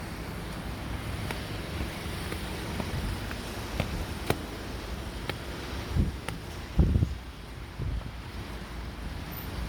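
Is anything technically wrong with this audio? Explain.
Yes. Generation loss runs through the whole clip. The audio sounds swirly, smeared and hollow, with blurred attacks and nothing above about 19.9 kHz. The likely cause is repeated lossy re-encoding, around seven MP3 passes at a rate near 126 to 127 kbit/s. Each decode and re-encode quantises on a shifted frame grid, so noise and spectral holes pile up. The result is more degraded than that bitrate would produce in a single pass.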